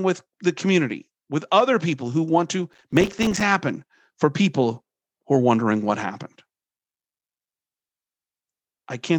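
Speech with a burst of gritty crackle from 2.73 to 3.41 s, a tearing roughness riding over the sound that stops when the load passes. This is processor overload crackle: the system repeatedly missed its deadlines for very short buffers of roughly 3 ms, dozens of times over that stretch, and each missed buffer dropped to silence with hard edges.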